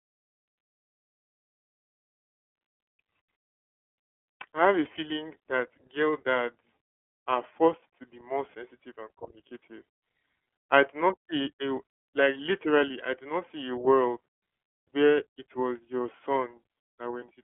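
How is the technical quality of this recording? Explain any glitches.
The recording is held back by iLBC codec coding from start to finish. The band is narrow, roughly 300 Hz to 3.4 kHz, and nothing is heard above 3.8 kHz. This narrowband VoIP codec codes each short frame's excitation on its own, and the damage here fits 30 ms frames at 13.33 kbps. Speech stays clear but sounds plainly rough and synthetic. It is thin and muffled, without the airy top.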